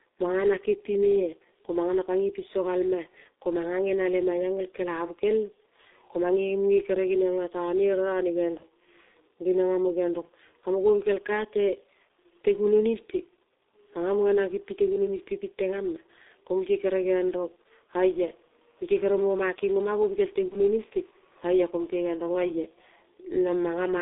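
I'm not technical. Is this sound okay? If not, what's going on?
No. The whole recording has passed through the G.723.1 codec, an old internet-phone system that squeezes speech into very little data. Everything above roughly 3.7 kHz is gone, so the voice sounds muffled and boxed-in, and the heavy squeezing adds a rough, hoarse edge and smears consonants. Unlike a simply quiet or distant recording, the roughness stays in the voice itself, not in the room around it.

There are also two short glitches from VoIP packet loss concealed by the speech codec, at about 8.57 to 8.63 seconds and 20.48 to 20.56 seconds. Each time, one small piece of the call, about 30 milliseconds, went missing in transit, and the phone software guessed what belonged there by stretching the previous sound. You hear a brief buzzy or blurred smear that sags and takes a moment to recover. A plain dropout would be a clean gap of silence instead.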